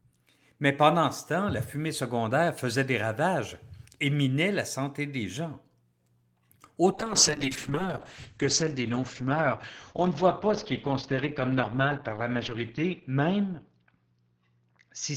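At 6.92 s a call bitrate drop begins and lasts to the end: the bandwidth estimate fell, so the encoder went from 32 kbps to 8 kbps, holding the lowest rate for the final 5.71 s. Fewer bits mean coarser coding, so the speech turns rough and watery, and the band narrows from 20 kHz to 6 kHz, dulling it. Unlike a plain low-pass filter, the texture itself degrades, and unlike packet loss, nothing drops out. It never recovers.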